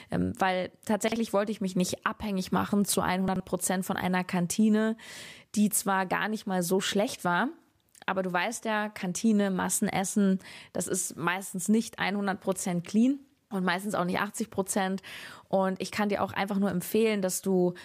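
A jumbled, garbled moment at 1.08 to 1.16 s, just before "wollte ich mich nicht", and again at 3.28 to 3.4 s after "nicht abhängig machen zu": chunks out of order, with 40 ms blocks played one and then two chunks late.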